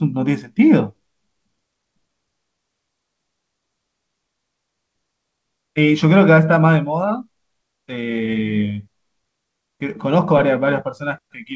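No technical faults can be heard in this speech, which comes through a call path working as expected, with nothing above 8 kHz, a band limit that fits a wideband call codec such as G.722 at around 64 kbps.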